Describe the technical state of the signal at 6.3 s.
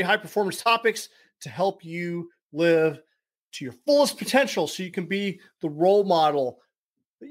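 At 6.3 s you're hearing sample clock jitter, the same as everywhere else in the speech. The converter's clock wobbles by something like a couple of microseconds, so each sample lands a touch early or late. That timing slip turns into an error that grows wherever the waveform moves fast, so it comes across as a grainy hiss riding on the louder, brighter parts, sitting around 35 dB under the signal, and dropping away in the pauses.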